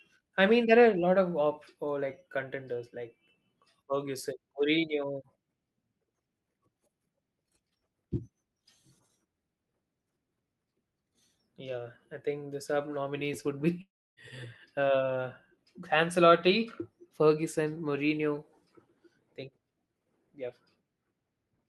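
A long network dropout runs from 13.81 s to 14.20 s, right after "the sub nominees would". The cause is likely a stall in packet arrival. The receiver stretches the last sound into a buzzy, fading tail, which decays into about 0.28 s of near silence. When the speech resumes, about 0.36 s of the original has been skipped. Around it, the call codec's coding texture and a top end that stops near 12 kHz remain audible.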